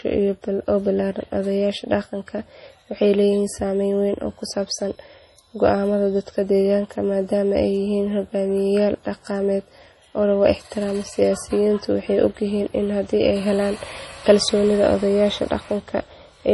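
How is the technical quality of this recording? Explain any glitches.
The recording is heavily degraded throughout by what sounds like MP3 compression. Nothing is heard above 11.4 kHz. S sounds turn watery and swirly, with metallic chirps. Starved of bits, the encoder likely cut the treble and dropped quiet detail frame by frame, which fits a low bitrate around 32 kbps.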